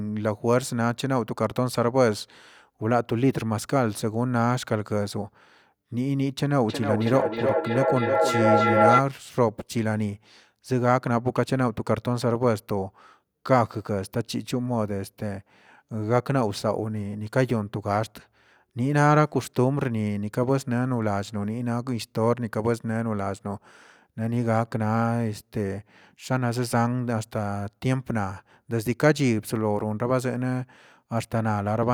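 Feedback echo between two devices runs from 6.68 to 9.07 s. A second device in the same room is playing back what the first microphone sent, and that microphone picks it up again. Neither echo canceller removes sound from the other device, so each phrase comes back at a fixed interval of about 300 ms, thinner and more ringing each pass. The loop is loud enough that the repeats build up rather than fading, peaking about 3 dB above the speech itself.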